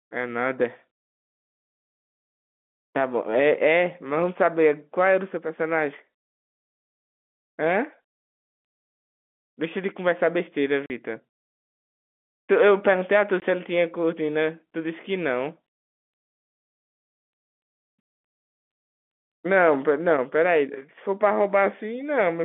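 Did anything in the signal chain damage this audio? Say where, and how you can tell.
Yes, at the network stage: packet loss filled with silence. The sound drops to dead silence from 10.86 to 10.90 s, a 40 ms hole, and again from 13.40 to 13.42 s, a 20 ms hole. Both gaps start and stop abruptly. The lengths fit 20 ms packets, two lost and then one. The receiver played nothing in their place. The narrow telephone band, roughly 200 Hz to 3.5 kHz, is simply the line coding.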